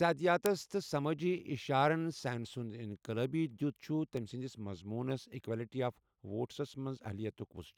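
A speech clip with a run of sharp ticks, roughly one per second, from 0.46 s to about 6.95 s, around seven in all, some noticeably stronger than others. These are word clock ticks: the digital link was read by a device on its own free-running clock rather than locked to the sender's. The two clocks differ by something on the order of 20 ppm, so about once a second they slip past each other and a single sample is dropped or repeated, leaving a brief click at each slip.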